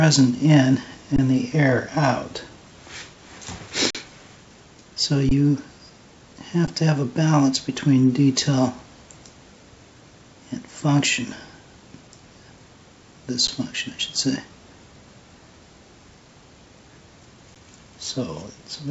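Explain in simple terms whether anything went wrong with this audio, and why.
There are six brief underruns with held sample: the playback buffer ran dry, so the sound froze on its last value and went flat. They fall at 1.16–1.18, 3.90–3.95, 5.29–5.31, 6.67, 13.47 and 17.55 s, each lasting between 10 and 43 ms. Nothing was skipped, so playback picks up where it stopped.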